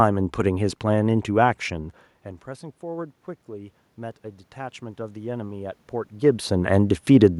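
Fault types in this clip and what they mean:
Automatic gain rising, 2.8 to 6.55 s: after the speech level at the microphone falls by about 18 dB, following the talker's move away at roughly 2 s, the gain control treats the input as too quiet and slowly pushes its gain up by about 6 dB over nearly four seconds. The voice and the room noise swell together as the gain climbs, making the background audibly grow rather than the voice alone.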